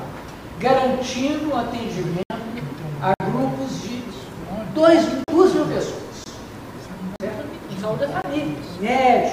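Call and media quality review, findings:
Output buffer likely not filled in time, so blocks of digital silence were written in place of audio. The sound drops abruptly to silence at 2.23 s (71 ms), 3.14 s (60 ms), 5.24 s (40 ms), 6.24 s (20 ms), 7.16 s (40 ms) and 8.22 s (20 ms). The longer gaps sound like short holes.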